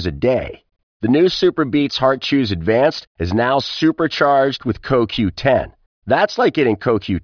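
Nothing in this speech recording stands out as a technical problem; the sound just carries on steadily from the first moment to the last without any hiccup worth pointing to.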